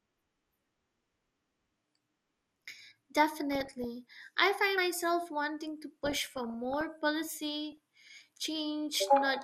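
A speech recording that sounds dull throughout, with a gurgling, grainy edge and upper-frequency regions that flicker in and out; on a spectrogram the top end shows as ragged, blocky patches switching on and off. This is likely MP2 compression at a low rate, plausibly around 80 kbps, starving the upper sub-bands of bits. DAB burbling appears at 0.72–1.30 s, 3.52–3.85 s (ending just before "I find myself wanting"), 6.04–6.84 s (just after "find myself wanting to") and 7.72–8.21 s. These are short blips of noise where uncorrected reception errors, at a small error rate of under one percent, corrupt individual sub-bands. A spectrogram shows isolated short blips confined to single sub-bands, and the waveform shows brief spiky bursts.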